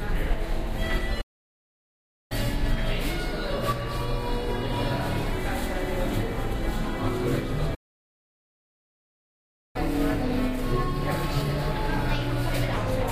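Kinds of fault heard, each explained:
Playback stall: The sound halts mid-flow and goes silent for 1.09 s from 1.21 s, then for 2.0 s from 7.74 s, likely because the player starved of data. Unlike a dropout, nothing is skipped. The audio resumes exactly where it stopped.
Catch-up at higher speed: Right after each stall, from 2.32 to 5.32 s and from 9.76 to 12.76 s, the audio runs at 1.1 times speed, about one and a half semitones sharp, to recover lost time. Unlike a steady pitch shift, it then settles back to normal.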